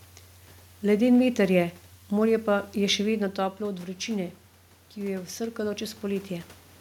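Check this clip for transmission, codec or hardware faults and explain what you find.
One fault turns up, in the gain stage rather than the transmission path or codec. The talker's level also shifts at around 3 s, but that is movement at the microphone, and the room noise belongs to the recording.

Automatic gain rising, 4.94 to 6.58 s: the input dropped by about 9 dB, and the automatic gain control responded by slowly raising its gain by about 4 dB over roughly 1.6 s. Because the gain applies to everything reaching the microphone, the speech and the room noise swell upward together, a gradual lift rather than a step.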